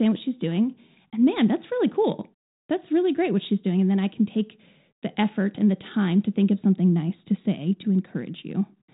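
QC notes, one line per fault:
No faults heard in this speech recording.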